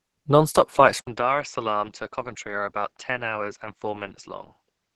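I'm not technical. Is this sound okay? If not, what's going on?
No, it has two problems. Throughout the whole recording, the speech has a plainly hoarse, muffled and grainy texture, as if the voice were being squeezed through a narrow pipe. The crisp edges of sounds come out rough instead of clean. This is likely caused by Opus compression, a method of shrinking audio files. Here it was set so tight that it switched to a speech-saving mode, trading clarity for a smaller file.

At about 0.99 s the sound briefly drops out for a split second (about 0.08 s). When it returns it is noticeably quieter and duller, and it stays that way to the end, as if someone had put a hand over the microphone. The brightest, airiest part of the sound is gone. The likely cause is an input switched to a poorer device: partway through, the recording system changed to a lesser microphone or a headset.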